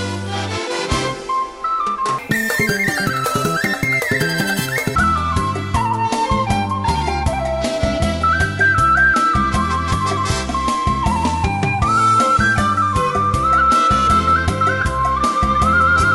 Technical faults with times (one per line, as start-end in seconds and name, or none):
2.19-4.95 wrong sample rate